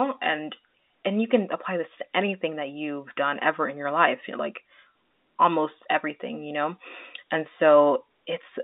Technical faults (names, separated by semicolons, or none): none